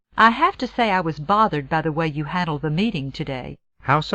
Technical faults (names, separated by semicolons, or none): none